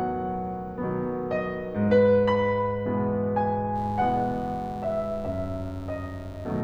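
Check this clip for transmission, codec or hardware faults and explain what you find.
One hardware fault is present: mains buzz in the music from 3.73 s to the end at 6.64 s. Switching spikes from a dimmer, rectifier or unshielded line leak in twice per 50 Hz cycle, producing a steady, raspy buzz at around 20 dB below the music. On a spectrogram it appears as a stack of evenly spaced horizontal lines at multiples of 50 Hz reaching several kHz. The waveform carries sharp spikes repeating every 10 ms.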